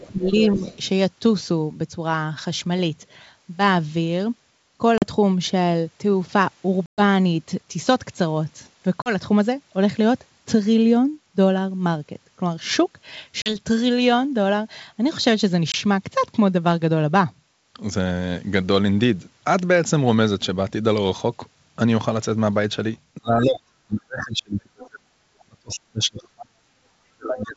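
From the start to 0.77 s a faint second voice, about 20 dB below the talker, sits under the speech. This is the other side's voice leaking through, likely loudspeaker echo that the canceller left in. Between 0.07 and 0.63 s the talker dips by up to about 15 dB. That is speech suppressed in double talk, likely the canceller ducking both voices at once.

At 4.98, 6.86, 9.02, 13.42 and 15.72 s the sound drops into hard-edged silent holes of about 40, 120, 40, 40 and 20 ms. This is packet loss on an ADPCM call. The decoder's predictor and step size lose track of the sender during each gap, so the speech comes back slightly distorted before it settles.

From 23.17 to 26.56 s the talker is pushed down again, by as much as about 40 dB, in pieces over roughly 3 s, as double-talk suppression returns. The other side leaks through at about 20 dB below the talker between 23.42 and 23.60 s, and at about 25 dB below between 24.83 and 25.75 s. 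The same suppression begins at 27.11 s and lasts to the end, with drops of up to about 35 dB and a short leaked fragment at 27.39–27.43 s, about 15 dB down.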